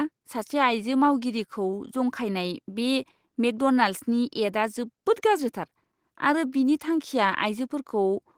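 A speech recording with no technical fault anywhere in it. Nothing in the audio calls for a time, a value or a cause.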